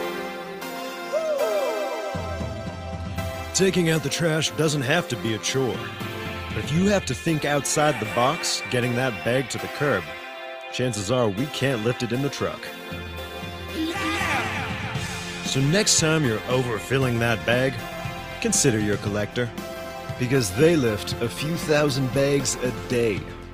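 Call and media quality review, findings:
Clock drift between sender and receiver: sender clock about 2% slow relative to receiver, present for the whole clip. Jitter buffer drains steadily; receiver must pad playback to stay in step. Source of the timing hiccups below.

Repeated timing corrections, 0.18 to 23.38 s: small, unevenly spaced hiccups and unsteady tempo throughout. Receiver repeatedly repeats short pieces, all in one direction. Playback runs at 98% speed, adding roughly half a second overall.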